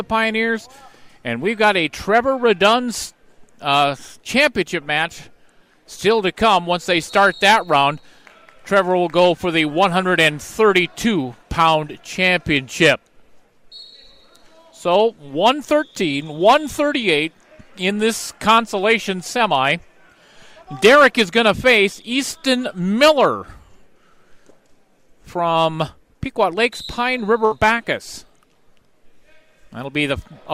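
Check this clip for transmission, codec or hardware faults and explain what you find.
One transmission fault is present, a burst of packet loss from 27.45 to 27.53 s. The receiver extended the last good audio for about 58 ms, fading it down, so the sound briefly smears on and dies away. Playback then resumes with roughly 60 ms missing.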